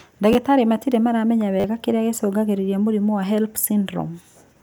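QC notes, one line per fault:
0.33–0.35 s, repeated buffer: a slice of speech about 10 ms long plays two extra times with hard joins because fresh audio arrived late, heard as a brief buzz.
1.6–1.64 s, repeated buffer: the same 10 ms repeat happens four extra times, so the buzzy stutter lasts longer and roughly 40 ms of speech goes missing.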